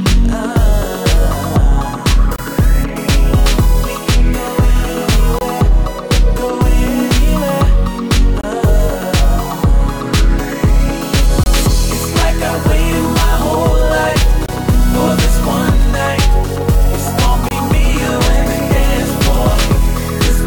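25 ms holes interrupt the sound at 2.36, 5.39, 8.41, 11.44, 14.46 and 17.49 s. This is a gap between chunks: silence left at each join of 3 s blocks.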